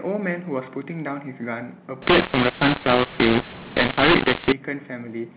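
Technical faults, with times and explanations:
2.02 to 4.52 s, mu-law and A-law mixed up: A-law telephone samples decoded as mu-law scramble levels, so speech turns harsh and distorted while pauses fill with hiss.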